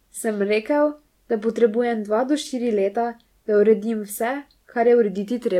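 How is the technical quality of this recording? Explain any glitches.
The technical quality of this recording holds up, with no glitches to explain.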